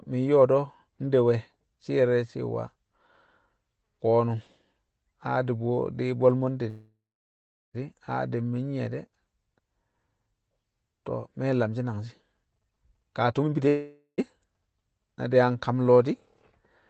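Call audio freeze, 6.69 to 7.76 s, right after "bwe̱l mo̱ nde": the speech stalls for just over a second. The last sound carries on as a fading buzz, then about 0.76 s of silence, before speech resumes exactly where it stopped. Nothing is lost, but the gap pushes everything after it about 1.05 s later. The likely cause is packets held up in transit, draining the jitter buffer.

Jitter buffer speed-up, 12.44 to 13.67 s: the speech runs at about 134% of its normal rate while the pitch stays unchanged, giving a hurried, clipped delivery. The receiver had more audio queued than it wanted, so it repeatedly cut out short pitch-period-length slices, roughly 0.4 s in all, to bring the delay back down.

Call audio freeze, 13.68 to 14.20 s: immediately after the speed-up, the audio stalls again for about 0.5 s. The held sound fades and only about 90 ms goes fully silent before speech continues with nothing missing. 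This is likely another brief run of late packets emptying the buffer.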